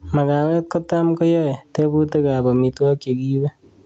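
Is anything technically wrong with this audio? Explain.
Yes. Gain pumping runs through the whole clip. The gain swings by roughly 10 dB. The likely cause is input gain set too high, with a fast limiter pulling it back on every peak. The speech sounds squashed. The top end stops near 8 kHz, which fits a wideband call codec.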